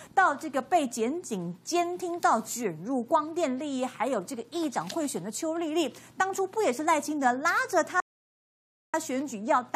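At 8.00 s the sound cuts off abruptly and falls to silence until 8.94 s, an audio dropout to silence lasting about 0.93 s. No room tone or noise floor remains in the gap, which points to a lost input, likely a disconnected device, failed link or stray mute, while the recorder kept writing silence. When the signal returns it resumes mid-flow, and whatever occurred during that stretch is missing.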